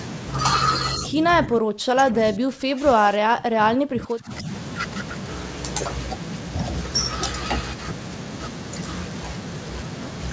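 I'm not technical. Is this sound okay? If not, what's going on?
No. From about 0.97 to 4.48 seconds the voice keeps sinking, getting much quieter and thinner, and at moments it nearly vanishes, for around three seconds in all. This is speech suppressed in double talk. The likely cause is that both people on the call spoke at the same time, and the call's echo control couldn't tell this voice apart from the other side's sound coming back through the speaker, so it turned this voice down too.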